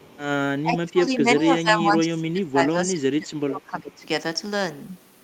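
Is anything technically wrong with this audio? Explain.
Yes, two faults are audible. From 0.00 to 0.19 s there is an echo leak: a faint copy of the speech returns about 376 ms late, roughly 30 dB below the speech. The cause is likely a far-end loudspeaker echo that the canceller failed to remove. On a spectrogram it shows as a weak, delayed repeat of the speech harmonics.

From 0.63 to 4.05 s the speech is suppressed in double talk. Across about three seconds it dips by as much as roughly 20 dB. That points to an echo canceller that likely mistook the overlap for echo and attenuated everything. The waveform envelope shows dips in level.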